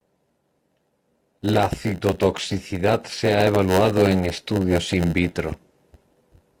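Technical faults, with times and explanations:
Throughout, block size mismatch (padded): a steady buzz near 92 Hz rides under the speech, which runs slow at about 0.92 times normal speed with its timbre unchanged. Each block arrives short and is padded with silence, so a brief gap recurs at the block rate.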